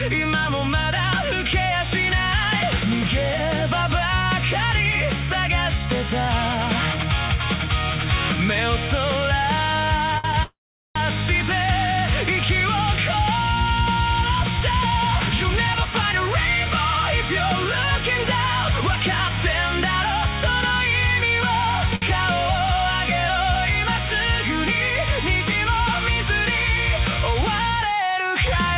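At 10.18 s a short stall from a late packet holds the sound for about 58 ms. The jitter buffer ran dry, so the receiver stretched the last sound, then resumed without loss. A second one follows at 21.95 s, lasting about 63 ms.

From 10.43 to 10.97 s there is a call audio freeze. The sound turns to a brief fading buzz, then about 0.4 s of silence, then resumes where it stopped. Packets were likely held up in transit, emptying the buffer.

Jitter buffer speed-up follows at 14.34 to 16.22 s, 16.65 to 18.25 s, 18.74 to 19.37 s and 27.44 to 28.09 s. The buffer held too much audio, so tiny pitch-period pieces were cut. Pace rises 3 to 9 percent at unchanged pitch, sounding hurried in the stretches at 105 percent or more. The narrowband band limit at 4 kHz fits a G.711 call codec.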